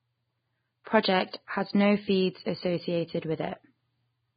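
From start to finish the speech has nothing above about 4.9 kHz, and the remaining upper band is hissy and grainy, with roughened tones and smeared consonant onsets. The likely cause is heavy Vorbis compression at a very low bitrate, around 15 kbps. The encoder kept only a smooth spectral outline and replaced fine treble detail with noise of similar energy. A plain low-pass filter would sound dull but clean. Here the band below the cut-off is itself noisy and rough.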